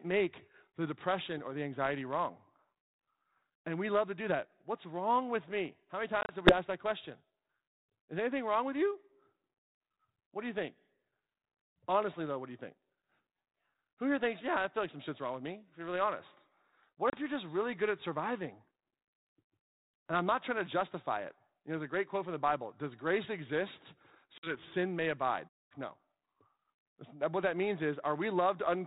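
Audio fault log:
6.21 to 6.54 s, packet loss on an ADPCM call: about 60 ms dropped in short gaps scattered over 80 ms, the longest run 30 ms, before "that question". Each gap is a hard-edged silence, and the decoder's adaptive predictor and step size drift from the sender's, so the sound resumes slightly distorted.
17.10 to 17.18 s, packet loss on an ADPCM call: a 30 ms hole before "you're just really good", then brief slight distortion while the decoder's prediction resynchronises.
24.38 to 24.55 s, packet loss on an ADPCM call: 50 ms lost between "grace exist" and "sin may abide". The speech returns slightly distorted until the adaptive step size realigns.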